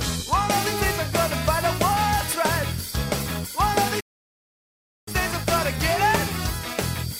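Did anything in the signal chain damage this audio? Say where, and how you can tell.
Yes, a playback stall: sound stops abruptly from 4.00 to 5.08 s, showing as a flat waveform gap and blank spectrogram band, likely buffer starvation or a blocked player thread.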